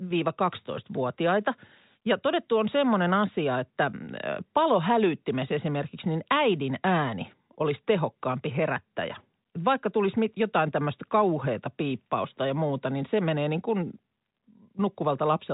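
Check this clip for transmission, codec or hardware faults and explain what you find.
No faults found.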